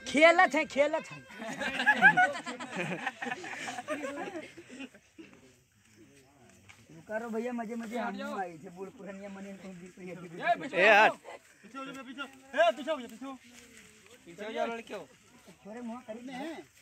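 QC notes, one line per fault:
No faults were found in this clip. There is nothing to log against any time.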